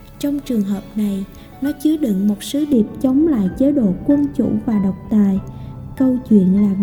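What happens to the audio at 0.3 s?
Nothing goes wrong at 0.3 s; the audio plays through that moment intact, with no dropout, click, distortion or other fault.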